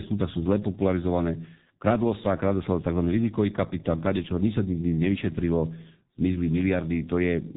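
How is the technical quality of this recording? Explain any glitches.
Quality is poor, with heavy G.723.1 codec damage throughout the speech. The coder discards everything above 3.8 kHz and rebuilds the voice from a slowly updated model at a rate that fits about 6 kbit/s, so it sounds muffled and hoarse, consonants smeared. A spectrogram shows a hard ceiling and blurred onsets.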